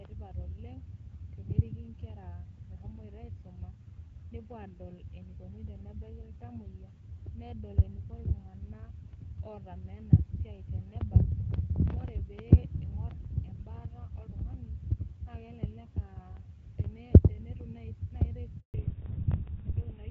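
Speech on a phone call, carried at first over the AMR wideband (HD Voice) codec, with the light coding texture that fits a 12.65 kbit/s link. At 18.60 s the sound dies away and stays silent for 140 ms, until 18.74 s. That is a handover gap. The call moved from one network to another, and no speech frames arrived during the switch. Whatever was said in that stretch is lost. From 18.74 s to the end, nothing above 4 kHz remains. This is a fallback to narrowband. The call dropped from the wideband codec to an older narrowband one, which fits GSM full rate. The sound turns duller and rougher for the rest of the clip.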